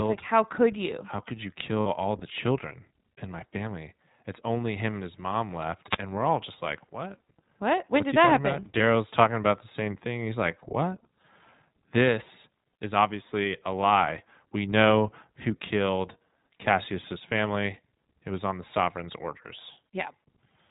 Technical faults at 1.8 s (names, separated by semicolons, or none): iLBC codec; lost iLBC frames